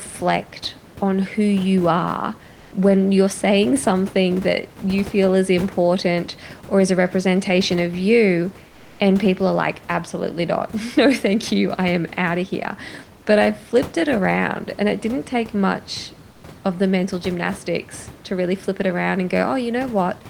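Comfort noise in place of the background at 2.53–2.71 s, 8.69–8.99 s and 16.31–16.43 s: room noise becomes flat, featureless hiss, about 2–3 dB quieter in the later two, likely Opus discontinuous transmission.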